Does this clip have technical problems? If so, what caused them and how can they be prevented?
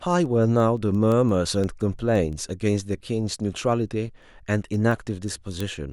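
Yes, there are word clock ticks running from 0.26 s to 5.78 s, about thirty sharp clicks roughly every 0.15 s, each a single slipped sample where the receiving device's free-running clock drifts past the sender's, an offset of around 100 ppm. Slave the receiver to the incoming digital clock to prevent it.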